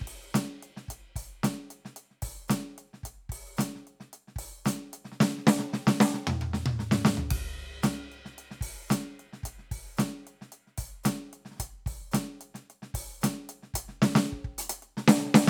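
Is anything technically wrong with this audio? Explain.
No, nothing stood out as technically wrong when listening to this music.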